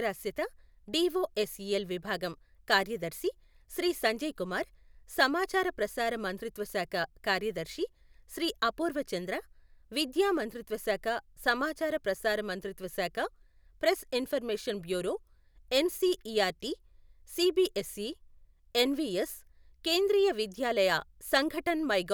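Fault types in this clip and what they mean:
No fault types are present in this clip.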